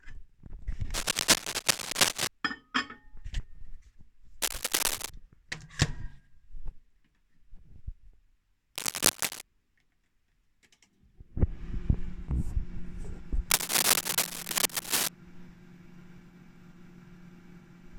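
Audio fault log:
0.94–2.28 s, 4.42–5.12 s, 8.75–9.41 s, 13.50–15.09 s: cable scratch noise. Dense, uneven bursts of scratching and rustling sit over the sound, roughly 5 dB louder than it. The likely cause is a worn cable, connector or control being moved, which makes its contact resistance change rapidly.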